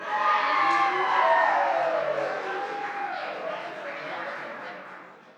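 One channel runs roughly 20 ms behind the other for the whole clip, and the two are summed to mono, causing channel delay (comb filtering). Cancellations begin around 20 Hz and repeat closely up the spectrum, leaving these sounds rough and slightly doubled.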